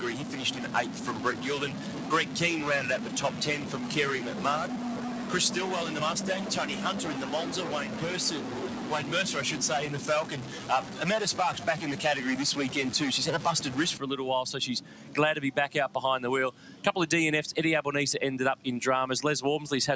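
A noise suppressor applied to music or sounds runs from start to finish. Built for speech, it treats held tones, ambience and reverb as noise and keeps pulling them down. The level swings by around 10 dB as it works, so onsets come through while sustained material sinks. The result is a pumping, fluttering and thinned sound, alongside the call microphone processing's bandwidth, which stops near 8 kHz.

A stuck bit runs from 0.00 to 13.97 s. It is heard as grainy or buzzy distortion riding on the whole waveform, with quieter passages filled by a gritty noise floor instead of falling silent. The likely cause is one data bit frozen at a fixed value in the converter or data path. That offsets roughly half the samples by the same amount in a pattern that follows the signal, and flips small values around zero into noise.

Sound cut by the noise suppressor shows up in eight places: 0.18 to 2.36 s, 2.99 to 3.76 s, 4.73 to 5.31 s, 7.86 to 8.02 s, 8.41 to 8.91 s, 10.45 to 11.00 s, 14.81 to 15.15 s and 16.52 to 16.84 s. 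Here the suppressor misreads steady or decaying sound as noise and dips it by about 4 to 5 dB, cutting tails short and dulling held parts. The longest stretch, at the start, covers well over a second of affected sound; the rest last a few tenths of a second.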